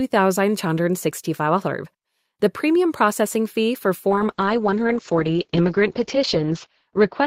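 From 4.1 s to the end, a call bitrate drop sets in: the encoder falls from 48 to 8 kbps, holding its lowest rate for about 2.5 s, and the top band shrinks from 20 kHz to 8 kHz. Unlike a simple low-pass filter, the sound also turns coarse and watery, not just duller.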